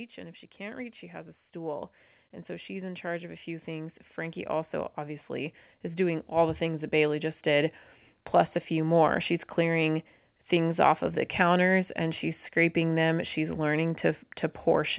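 From 0.15 s to 7.78 s, the level climbs steadily. This is automatic gain rising. The gain control judged the input too quiet and kept pushing its gain up, by about 14 dB in total. The speech and the background noise swell together, so the room seems to creep closer. The rise settles just before "plus a few more". Throughout, nothing sounds above 4 kHz, which points to a narrowband telephone codec on the call path.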